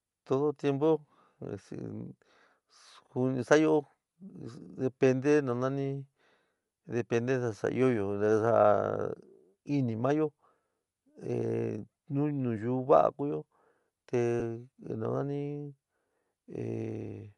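Bluetooth LC3 compression is plainly audible across this whole speech recording: the upper spectrum has a breathy, grainy texture where fine detail gives way to noise-like fill. That texture is likely from a low-rate LC3 encode, consistent with about 48 kbps and 10 ms frames. Lost LE Audio frames appear at 14.40 to 14.42 s, where roughly 10 ms of audio drops out. The decoder covers the gap by repeating the previous spectrum with scrambled phase, leaving a brief noisy smear in place of the speech.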